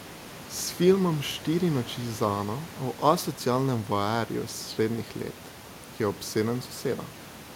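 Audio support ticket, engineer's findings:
No system fault found on the speech recording; the room noise audible underneath sits about 17 dB below the speech and belongs to the recording environment, so no action is needed on the audio path.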